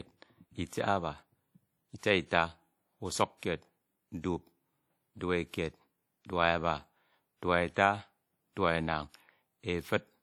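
Throughout the speech there is a ringing, washy quality with hiss that breathes with the signal, likely WMA compression at a bitrate around 48 kbps, spreading quantisation noise over long blocks. At 1.98 to 2.03 s and 3.38 to 3.43 s, a brief hiss of about 50 ms precedes sharp attacks, softening them. This is pre-echo: block-wide noise leaking ahead of each onset.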